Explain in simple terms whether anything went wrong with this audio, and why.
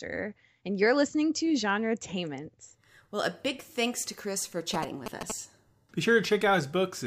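From 4.74 to 5.32 s, a galloping dit-dit-dit of short buzzes cuts into the speech, fairly loud. These are GSM signalling bursts. A nearby 2G phone was exchanging short radio bursts with the network. The audio circuit picked them up as a 217 Hz buzz.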